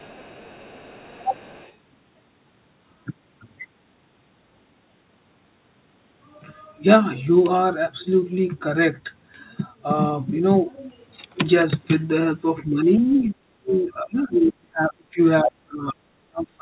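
Speech clip carried over a narrowband call path with nothing above 4 kHz, consistent with G.711 A-law at 64 kbps, and it has two echo-control faults. From 0.0 to 1.74 s a faint second voice, the other side's voice leaking through, sits about 30 dB under the talker. It returns in short scraps at 13.11, 13.81 and 14.15 s, about 20 to 30 dB down, the likely remnant of loudspeaker echo the canceller failed to remove. Unlike background noise, it has speech rhythm. Between 12.65 and 15.19 s, and again from 15.41 s to the end, the talker's own voice sinks by up to about 40 and 35 dB, for roughly two seconds in the first stretch. This is likely speech suppressed in double talk. The first stretch of dips overlaps the leaked voice, which separates them from packet-loss dropouts.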